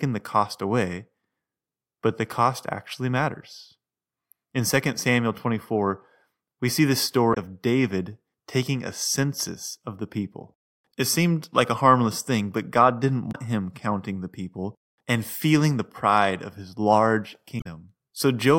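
Damaged data in a compressed stream makes the decoder lose frame sync, producing brief disruptions in the speech: 7.30–7.37 s after "we see the", 13.29–13.36 s before "him counting the people", and 17.57–17.66 s.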